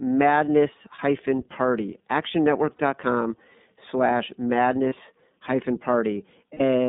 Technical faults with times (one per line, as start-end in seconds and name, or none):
0.00-6.89 iLBC codec